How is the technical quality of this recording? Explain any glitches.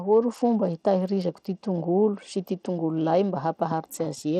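The quality takes a clear hit from start to finish. The speech runs through what sounds like Bluetooth SBC compression, and the damage is plainly audible. The top end thins out and flickers, with a gritty haze riding on the sound. That's the likely signature of SBC running at a low bitrate, something around 80 kbps. With so few bits, the upper sub-bands get starved and the rest are coarsely quantised, which leaves that crunchy, aliased texture.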